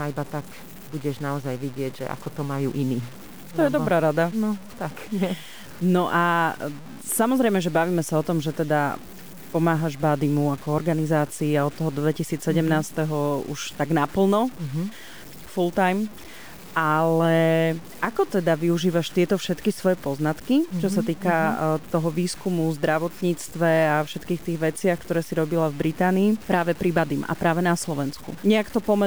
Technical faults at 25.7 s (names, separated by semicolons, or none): low bit depth without dither